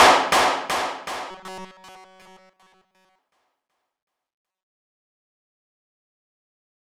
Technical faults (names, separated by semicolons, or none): robotic sound from repeated short buffers